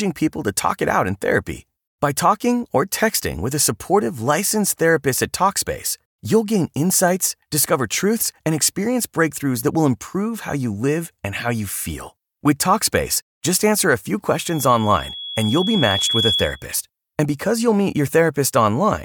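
Just after "just answer a few", at 14.46 s, loudspeaker feedback squeal sets in: the microphone re-captures its own loudspeaker, and a 3.4 kHz tone swells over about two seconds until it is roughly as loud as the speech, ending at 16.66 s. A spectrogram shows one brightening horizontal line, and the waveform's envelope grows steadily.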